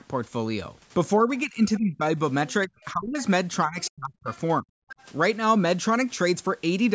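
Speech suppressed in double talk: from 1.22 to 2.19 s, 2.67 to 3.18 s, 3.65 to 4.28 s and 4.62 to 4.72 s the talker's own voice sinks by roughly 20 to 40 dB. The likely cause is the echo canceller ducking everything while both sides spoke. Unlike leakage, this removes sound rather than adding it.

Other side's voice leaking through: faint scraps of a second voice appear at 2.49 to 2.53 s, 3.81 to 3.90 s, 4.27 to 4.39 s and 4.89 to 5.06 s. The first three sit around 30 dB below the talker and the last about 20 dB below. These are likely loudspeaker echo that cancellation missed. The band-limited sound, with nothing above 8 kHz, comes from the normal call microphone processing.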